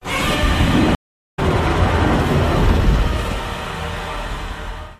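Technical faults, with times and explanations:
0.95–1.39 s, stream reconnect: the connection dropped, so the player stopped and then reconnected with a fresh decoder partway through the stream. The sound cuts to silence for about 0.43 s, then resumes roughly 0.4 s further along, so a short stretch of audio is skipped.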